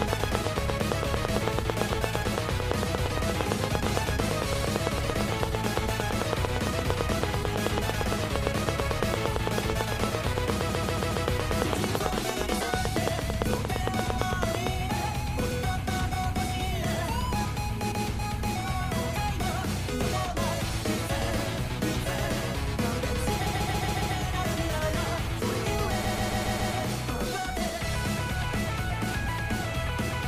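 From 0.02 to 14.68 s a regular ticking, about 8.9 clicks per second and some 150 in all, rides over the sound and the pauses, peaking about 20 dB above it. This train of clicks is likely pulse interference from nearby equipment or a faulty connection or power supply.

Stutters come as a block of about 139 ms, which fits six compressed frames, replays: four extra times at 10.68 to 11.24 s, once at 17.90 to 18.04 s, and five times each at 23.45 to 24.15 s and 26.03 to 26.73 s. These repeated frames were decoded again, lengthening the audio.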